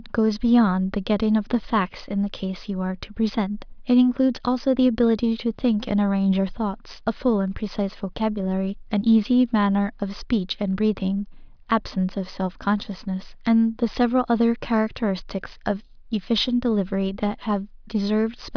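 Speech recording with no audible technical faults anywhere in its run.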